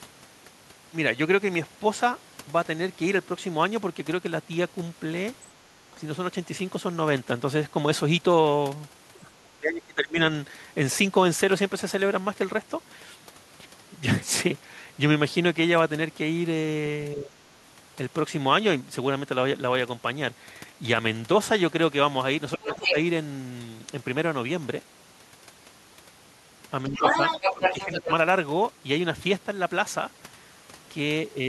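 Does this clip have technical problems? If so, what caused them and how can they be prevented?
Yes. Speech suppressed in double talk: the speech level dips at 5.75–5.98, 9.24–10.19, 17.14–17.35, 22.57–22.97, 26.89–27.15 and 27.57–28.1 s. It falls by roughly 10 to 25 dB, and the deepest drop is at 9.24–10.19 s. This is likely an echo canceller that could not tell the talker from loudspeaker echo during overlapping talk, so it attenuated both. Using a headset or an echo canceller with better double-talk detection would prevent it.

The other side's voice is leaking through at 22.67–22.95 s and 26.93–28.12 s, at roughly the same level as the talker. The canceller likely left loudspeaker sound in the microphone signal. Headphones or lower speaker volume would prevent it.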